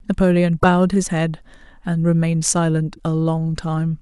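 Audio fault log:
0.56–0.64 s and 2.91–3.00 s, damaged data in a compressed stream: in each place, part of the encoded speech reached the decoder corrupted. The decoder could not read those frames correctly, lost its frame alignment and had to search for the next valid header before normal decoding resumed. Each time, this produces a short disturbance of about 80 ms that breaks abruptly into the speech.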